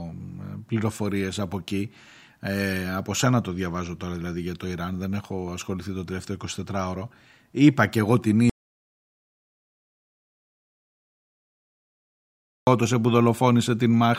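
At 8.50 s the speech cuts to total silence until 12.67 s, an audio dropout to silence lasting about 4.17 s, likely from the input being lost while zeros were written. The waveform goes flat, and the spectrogram shows a blank band with no room tone.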